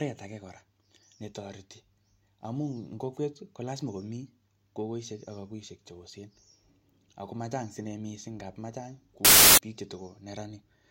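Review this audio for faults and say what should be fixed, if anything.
From 9.25 to 9.58 s the speech turns into loud, harsh broadband noise: samples built from the wrong bytes. The reader misassembled each sample's bytes, so the fast-changing low bits became the dominant part of each value for about a third of a second. Prevent it by validating byte order and sample alignment at the decoder before playback.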